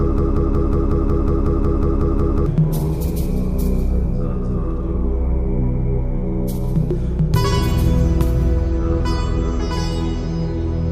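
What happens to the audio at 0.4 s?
The stream likely stalled and kept replaying one fragment: a broken-record loop, under way from the start, repeats a 0.18 s piece twelve times until 2.46 s.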